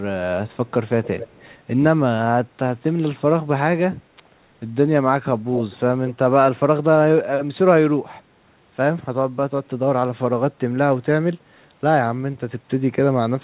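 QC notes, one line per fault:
0.88–1.56 s, echo leak: a faint second copy of the speech trails the original by about 250 ms, roughly 15 dB quieter. This is likely the far end's loudspeaker bleeding into its microphone, with the echo canceller letting part of it return.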